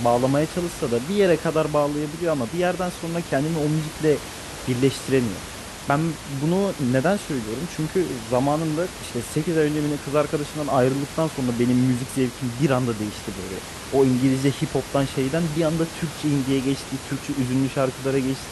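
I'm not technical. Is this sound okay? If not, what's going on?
Yes, nothing has gone wrong with this speech recording. You can hear some background noise from the room the microphone was in, but it sits well below the speaking and is simply part of the place where it was recorded.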